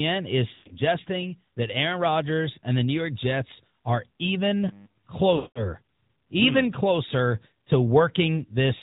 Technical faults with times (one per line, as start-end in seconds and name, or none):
0.00-8.83 AMR narrowband mobile codec
0.54-0.76 lost AMR speech frames
4.69-5.07 robotic sound from repeated short buffers
5.36-5.67 lost AMR speech frames